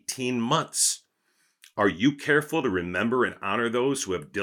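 Nothing is technically wrong with this clip.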